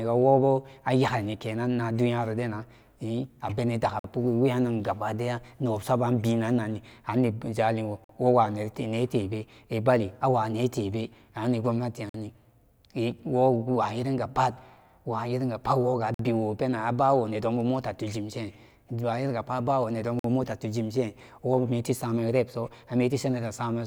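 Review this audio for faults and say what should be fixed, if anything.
Short hard-edged holes of silence, each 50 ms, cut into the speech at 3.99, 8.04, 12.09 (just after "tebe ani"), 16.14 and 20.19 s (just before "mota tuginshin wometi samen"). This is a gap between chunks: the audio arrives in 4 s pieces with silence at each join, interrupting but not losing sound. Fix it by playing chunks back to back without padding, using gapless joins and starting the next chunk before the current one ends.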